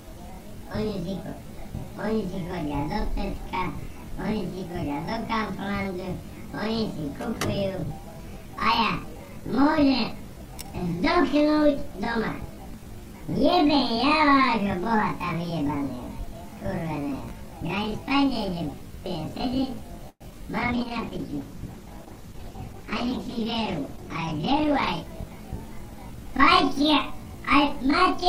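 From 20.09 to 20.23 s there is a call audio freeze: the last sound carries on as a fading continuation, then about 50 ms of flat silence appears in the waveform before the audio resumes where it stopped. The likely cause is delayed packets draining the jitter buffer, adding about 112 ms of delay.

At 20.31 to 20.33 s, short concealed packet loss drops about 20 ms that never reached the decoder. The gap is patched with a brief synthetic continuation, heard as a quick smear and visible as a tiny blurred patch on the spectrogram.

A call bitrate drop from 128 to 13 kbps runs from 20.62 to 24.97 s. Coarser Opus coding makes the sound rough and muffled, and the spectrogram loses high-frequency detail until the rate recovers.

A jitter buffer speed-up runs at 103% from 22.17 to 23.46 s and at 104% from 24.03 to 25.02 s, removing roughly 50 ms and 40 ms of audio. The sound runs slightly faster, with harmonics staying level on the spectrogram because pitch is unchanged.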